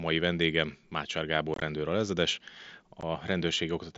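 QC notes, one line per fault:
1.54–1.62 s and 3.01 s, unconcealed Bluetooth headset packet loss: the first spot is a rough, chopped patch where about 52 ms of short voice packets vanish across 75 ms, the longest gap about 22 ms. At 3.01 s another 15 ms of packets drops out. Missing packets were left as silence or an idle pattern, not patched, so the gaps have hard edges. Concealment would instead smear or repeat sound across them, and the surrounding sound is wideband mSBC.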